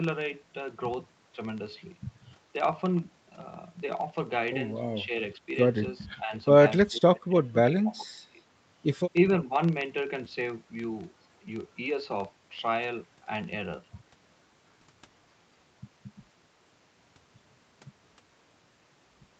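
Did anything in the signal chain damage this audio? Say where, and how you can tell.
Yes. A steady buzz at about 23.4 Hz runs through the whole clip. It comes from a processing stage at the driver or buffer level: a filter restarted on every block. The filter loses its state at each block boundary and starts again from zero. That leaves a small transient at the start of every block. The rate fits a 2048-sample block. The buzz grows louder with the speech and fades in quieter passages.

The speech also dips in five places: 5.06 to 5.12 s, 6.17 to 6.32 s, 6.9 to 7.59 s, 7.79 to 8.4 s, and 9.44 to 9.53 s. The short dips fall by about 10 dB. The two longer ones go deeper, around 20 to 25 dB, and last over half a second. This pattern points to the call processing stage. It is likely speech suppressed in double talk: the echo canceller mistook the talker for loudspeaker echo and turned the speech down.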